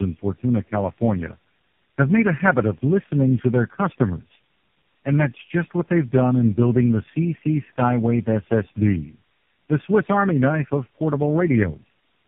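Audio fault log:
throughout, tandem speech coding. The speech sounds rough, muffled and warbly. Nothing is heard above 3.6 kHz. This fits a call that crossed several networks, each with its own speech codec. At every border the audio was decoded and coded again. Here that points to three low-rate speech coders in a row, GSM full rate first, then AMR-NB at 6.7 kbit/s twice, with G.711 links between them. Each coder worked on the previous one's damage, so the errors stacked.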